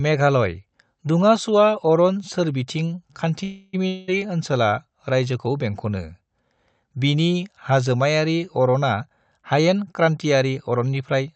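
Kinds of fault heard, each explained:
Call audio freeze: Right after "अरन सोरबिथिं", from 3.43 to 3.75 s, the sound stalls and the last bit gets stretched into a fading buzz for about 0.3 s. That's the classic sign of packets held up in transit with the jitter buffer running dry, which is the likely cause here. When things resume, nothing's actually lost; the audio just carries on from where it stopped, now running roughly 0.3 s later than before.
Long network dropout: Just after that, from 3.87 to 4.10 s, there's another fading buzz of about 0.2 s, but this time the audio comes back further along, with roughly 200 ms of material simply gone. That's what you get when a run of packets never arrives and the receiver papers over the hole with concealment, likely a network dropout. It picks back up at "ओनसोला रायजोखौ बेंखनो" with that chunk skipped.
Jitter buffer speed-up: After "हाजोमायारि अरना", from 9.01 s to 11.29 s, the speech runs at about 107% speed with the pitch unchanged, so it sounds rushed. 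The receiver is trimming tiny slices, one or a few pitch periods at a time, over and over to shrink a backlog in the jitter buffer, cutting around 150 ms in total across that stretch. It sounds hurried.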